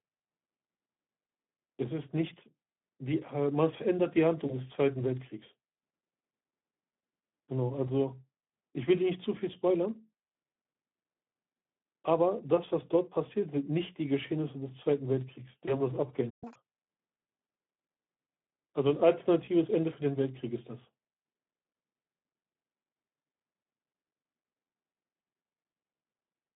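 The whole clip has that thin, hoarse Speex codec sound, with a gritty, noisy edge on the speech. It's squeezed into a phone-style band of roughly 150 Hz to 3.6 kHz, which fits a Speex stream running around 11 kbps.

At 4.47 to 4.57 s there's VoIP packet loss concealed by the speech codec. The decoder fills what sounds like a single lost 20 ms frame by stretching the last bit of sound into a short smear. The speech stays a little weak and smudged for a moment before it settles.

The same thing happens again at 15.65 to 15.81 s. It's another 20 ms gap patched over, and the fill and soft recovery drag on a bit longer this time.

Then at 16.30 s comes a playback stall. The sound just cuts out mid-flow for about 120 ms, likely because the player ran dry of data.

Right after, from 16.44 to 16.56 s, the catch-up at higher speed kicks in. The player rushes its backlog at double speed, so everything jumps up around ten semitones into a brief chipmunk squeak before dropping back to normal pitch.

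Last, at 19.45 to 19.49 s there's one more bit of concealed packet loss. It's a quick 20 ms patch with a dip in level as the decoder recovers.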